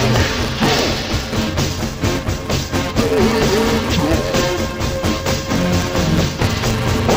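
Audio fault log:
Throughout: interleaved audio read as planar. The sound is dull and robotic, with a steady buzz at 172 Hz and no clear octave drop. Each 5.8 ms block, which fits a 256-sample block, has its alternating left and right samples split into two half-speed halves played side by side. Blocks this short smear the content instead of shifting pitch. A spectrogram shows evenly spaced comb lines 172 Hz apart, and the waveform shows a regular seam every 5.8 ms.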